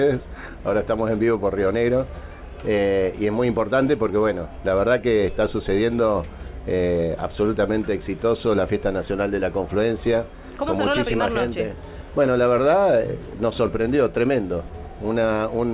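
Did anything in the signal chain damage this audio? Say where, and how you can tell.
No, nothing in the chain damaged this one; the sound went through a call path, and the top end stopping at 4 kHz is simply the narrowband ceiling of a telephone codec such as G.711 A-law, not a fault.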